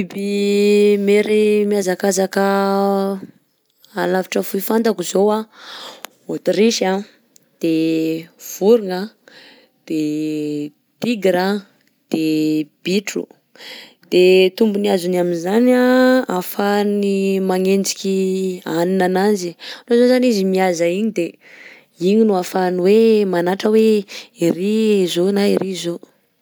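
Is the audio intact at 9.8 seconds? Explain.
Yes, the audio is intact at 9.8 seconds, with no fault heard at that point.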